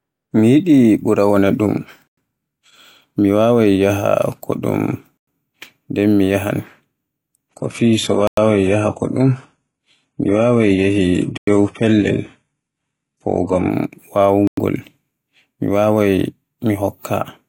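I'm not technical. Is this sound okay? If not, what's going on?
No. The speech has a gap between chunks at 2.07, 5.17, 8.27, 11.37 and 14.47 s: a tenth-of-a-second hole, roughly every three seconds. The audio arrives in blocks, and each join leaves a brief silence where playback pauses before the next block starts.

From 7.49 to 13.69 s, an adaptive stream at a lower bitrate takes over. The connection dropped the stream to a cheaper, lower-quality version. The sound turns dull, with nothing above 11.5 kHz, then switches back sharply without any break.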